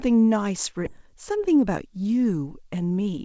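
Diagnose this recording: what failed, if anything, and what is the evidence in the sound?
The jitter buffer, on the receive side of the call path, discarded a block of queued speech while later packets were already waiting. At 0.86 to 0.88 s playback jumps straight ahead. Roughly 0.7 s of speech is missing and nothing fills the gap, so the syllables on either side are butted together with a hard join. This is a skip ahead: the buffer dropped its backlog, and the latency fell by about the same amount.

The buffer then held more audio than its target and trimmed the excess by cutting short pitch-period pieces out of the signal, many times in a row. This is jitter buffer speed-up. From 0.98 to 2.08 s the speech runs about 6% fast, and from 2.76 to 3.21 s about 15% fast. Each stretch sheds around 70 ms. The pitch stays put, but the delivery sounds rushed, most noticeably in the later, steeper stretch.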